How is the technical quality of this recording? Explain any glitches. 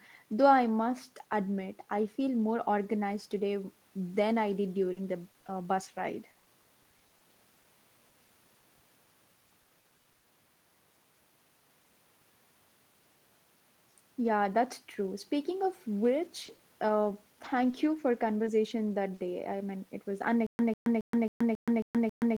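Technical quality is poor in three stretches: the middle of the recording suffers packet loss, the later part has a handful of small dropouts, and the final two seconds break into a stutter.

From 4.81 to 7.22 s, again from 8.09 to 9.09 s, and from 9.49 to 10.26 s, there is repeated packet loss with a robotic sound. The receiver patched each hole by extending the preceding sound, and the next hole arrived soon after. No hole is longer than 60 ms. In the first stretch the patching covers about 14 percent of the time, roughly a dozen dropouts, so the speech turns choppy and metallic. The second stretch has a similar density, about five dropouts. The third is the worst, with about a third of 9.49 to 10.26 s synthesised, so the robotic quality is strongest there.

At 7.63 s there is a short concealed packet loss: about 20 ms never arrived in time. The decoder filled it by continuing the preceding sound, pitch-based if voiced and as shaped noise if not, then crossfaded back into the real signal. 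It comes across as a brief smear or wobble, and a short consonant at that point can drop out.

Between 16.47 and 19.40 s there are scattered short gaps, roughly five isolated losses totalling 140 ms of missing audio, none longer than about 40 ms. Each was concealed by extending the last sound, covering only about 5 percent of the span. The speech stays clear but carries brief hiccups and smears.

From 20.47 s to the end there is a stutter with silent gaps. A 146 ms fragment repeats seven times, each time followed by about 125 ms of digital silence, for a steady cycle of roughly 271 ms. The likely cause is a stalled stream or player that replayed its last buffer on each retry and then ran dry. Whatever should have played in those final seconds is lost.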